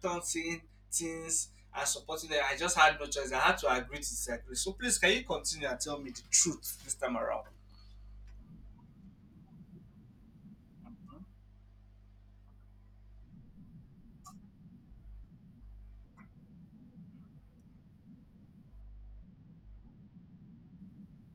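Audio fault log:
18.81–20.79 s, channel delay (comb filtering). One channel arrives a tiny fraction of a millisecond late, which fits a delay of about two samples. When the channels sum to mono, they cancel near 10 kHz. The speech sounds dull and loses its top end.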